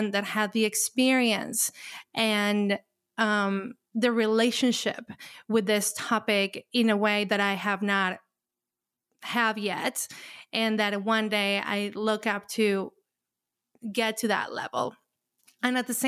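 No technical faults can be heard anywhere in the recording. There is nothing to place on a timeline.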